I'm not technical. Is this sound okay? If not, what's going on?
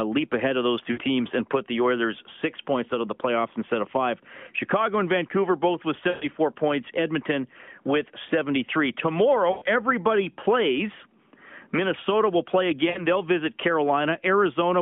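No. It's a phone-call recording with lost AMR speech frames: radio errors wiped out bits of sound, so the phone briefly stretched the last good sound and faded it. You'll hear short dropouts or warbles at 0.92–1.00 s, 6.10–6.27 s just after "both with", 7.70–7.73 s, 9.52–9.64 s just before "everybody plays", and 12.90–13.06 s just after "will play".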